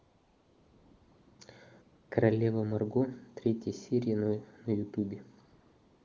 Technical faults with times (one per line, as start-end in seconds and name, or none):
0.00-1.39 AMR comfort noise
1.81-2.11 AMR comfort noise
5.43-6.05 AMR comfort noise